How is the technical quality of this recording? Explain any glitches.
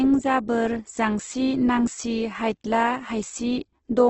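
The recording is heavily degraded by low-rate compression throughout. Nothing is present above about 8.1 kHz, and the speech sounds grainy, rough and noisy. This is likely Opus compression in its CELT music mode, at a rate that fits roughly 12 kbps. Short of bits, the encoder keeps each band's energy but fills the band with noise or folded lower-frequency content, so the fine detail is replaced by texture.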